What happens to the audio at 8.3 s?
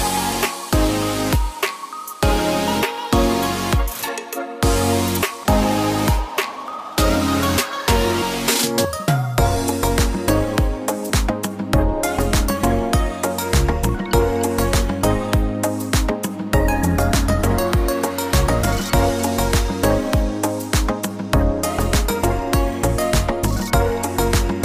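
Nothing goes wrong at 8.3 s; the audio plays through that moment intact, with no dropout, click, distortion or other fault.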